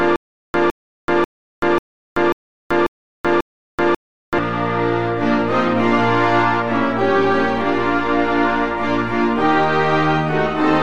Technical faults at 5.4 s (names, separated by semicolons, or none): none